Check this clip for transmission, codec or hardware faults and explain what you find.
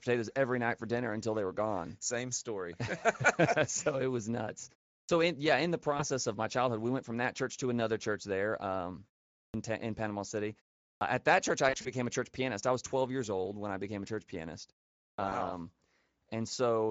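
Yes, there are faults of three kinds: Speex coding throughout, four clipped starts after pauses, and three spots of concealed packet loss.

The whole clip carries plainly audible Speex codec damage. The rate is about 16.8 kbps. This CELP coder has too few bits to rebuild the excitation cleanly. The speech comes out noisy and hoarse. At this rate the top band is a shaped, noise-like fill.

A clipped start after a pause occurs at 5.05 s, after "so it was nuts". It recurs at 9.5 s, 10.97 s and 15.14 s, after "became a church pianist". Each pause lasts about 0.4 to 0.5 s. The output device sleeps during the silence. It then swallows about 37 to 43 ms of onset, so speech begins abruptly.

VoIP packet loss concealed by the speech codec appears three times. The first is at 5.97 to 6.04 s, between "in yeah in the" and "of my childhood we", with 20 ms lost. The second is at 11.69 to 11.92 s, where 80 ms is lost across 160 ms, in runs up to 40 ms. 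The third is at 15.29 to 15.32 s, with 20 ms lost. This fits 20 ms frames. The decoder extends the last pitch and filter with falling gain. The result is a buzzy or noisy stretch, and the speech stays weak just after it.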